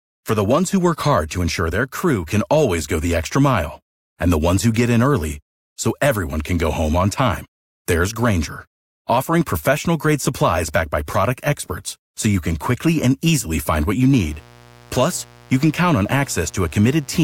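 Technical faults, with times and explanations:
14.13–17.23 s: mains buzz. A steady, raspy buzz enters and runs to the end, roughly 30 dB below the speech. Sharp switching spikes twice per 60 Hz cycle build a dense ladder of harmonics reaching several kHz, giving a rasp rather than a pure hum.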